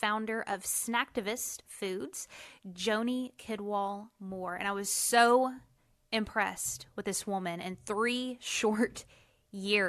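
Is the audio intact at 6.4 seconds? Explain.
Yes, at 6.4 seconds the speech is intact, with no audible dropout, distortion or other fault at that moment.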